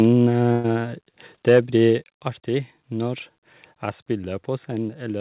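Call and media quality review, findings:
Microphone overload, 0.00–0.05 s: brief harsh crackle on the opening peak, tops flattened about 1 dB past the converter's limit, a few percent of samples clipped. Likely cause: capture input volume too hot, so the converter hit its limit. Recurs 1.49–1.59 s, crackle more pronounced, peaks about 3 dB over, roughly 5% of samples flattened. Same mechanism, the loudest syllables squared off at the converter's limit.

Burst of packet loss, 0.52–0.66 s: sound smears into a held, decaying tail for about 118 ms, then jumps ahead. About 120 ms of audio never arrives. Jitter buffer concealment stretched the last received frame and faded it out. No silent gap, just the stretched tail. Playback resumes past the lost stretch on the G.711 mu-law call path, band-limited to 4 kHz, which fits a 64 kbps stream.

Microphone volume stepped down, 1.02 s: sudden level drop of about 3 dB across sound and background together, with no fade. 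Likely cause: the call software's gain control cutting device input volume after the opening overload. Again at 2.04 s, a larger drop of about 5 dB, shortly after the 1.49 s clipping, consistent with a further single-step reduction.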